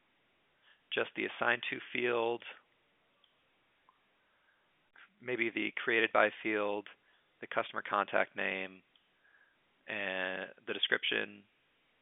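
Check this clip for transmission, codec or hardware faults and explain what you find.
No faults turn up anywhere in this clip.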